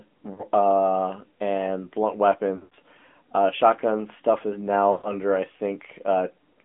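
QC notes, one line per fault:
throughout: AMR narrowband mobile codec. The speech sounds buzzy and synthetic, confined to a band of roughly 200 Hz to 3.4 kHz. A vocal-tract model driven by sparse pulses rebuilds each 20 ms frame at a bitrate that points to a mid-rate AMR-NB mode near 10 kbps.
0.34–0.44 s, 2.56–2.74 s, 4.92–5.13 s: lost AMR speech frames. The first spot brings a brief dip, and the longer ones a smeared, drawn-out sound sinking toward silence, then a weak, rough restart. The decoder repeats the last pitch and filter settings at falling gain over the gaps of 40 ms, 140 ms scattered across 160 ms, and 120 ms.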